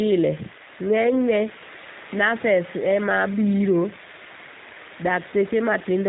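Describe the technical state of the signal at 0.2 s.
At 0.2 s you're hearing G.729 codec damage, and it runs through the whole clip. The speech is rebuilt from a vocal tract model, a pitch predictor and four pulses in each half of a 10 ms frame, which fits an 8 kbit/s stream, so it sounds plainly rough and synthetic, with nothing above 4 kHz.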